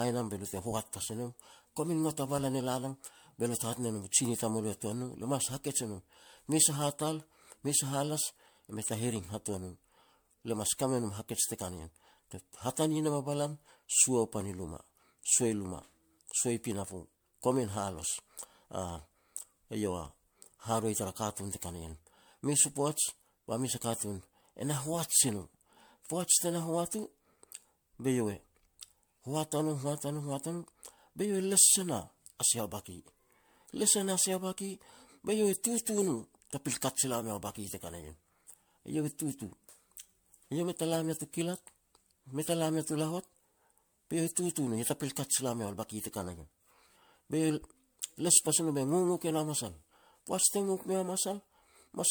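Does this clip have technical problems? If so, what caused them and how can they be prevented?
Yes. Throughout, the speech sounds swirly, hollow and smeared, with blurred attacks. This is likely generation loss from around seven MP3 passes near 100 kbit/s, worse than one encode would cause. Prevent it by editing from a lossless master and encoding once.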